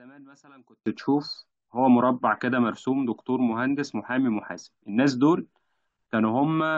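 From 0.0 to 0.86 s, the speech sinks about 31 dB to a faint trace, likely from one channel inverted cancelling in mono. The waveform is nearly flat and the spectrogram pale.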